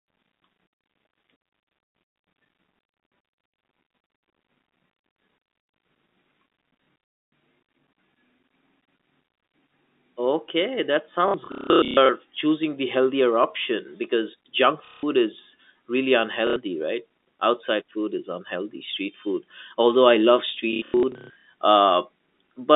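Speech carried over a telephone-band line (roughly 200 Hz to 3.7 kHz), broken by packet loss with the last packet repeated at 6.84–7.32, 11.28–12.09, 14.85–15.03 s (just before "is really"), 16.47–16.56 s (just after "is really") and 20.73–21.45 s (after "food although I love"). Each lost stretch is filled by replaying the previous packet, giving a robotic stutter at about 33 Hz, which fits 30 ms packets. On a waveform the repeated blocks appear as identical copies, and the spectrogram shows vertical streaks at each seam.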